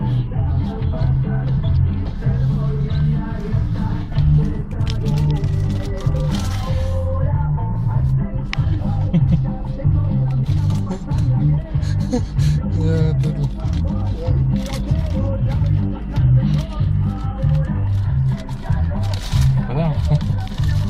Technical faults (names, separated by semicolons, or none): AAC frame loss with concealment